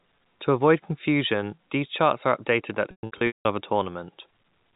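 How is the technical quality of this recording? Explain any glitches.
The recording has one clear glitch, over a telephone-band path consistent with G.711 coding. Packet loss with pitch repetition hits from 2.91 to 3.45 s. About 390 ms goes missing across 540 ms, in gaps whose sizes fit 30 ms packets. The receiver repeats the last pitch period to fill each gap. The longest run, 180 ms, turns buzzy, fades toward silence, then cross-fades back into speech.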